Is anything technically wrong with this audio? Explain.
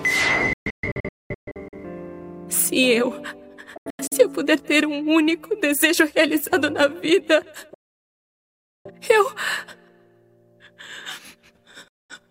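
Yes. There is digital broadcast dropout at 0.53–1.78 s, 3.77–4.16 s, 7.74–8.91 s and 11.88–12.15 s. The receiver lost valid frames and muted within about 3 ms. The first two are broken holes. The third is solid, about 1.1 s. Everything sent during those gaps is gone.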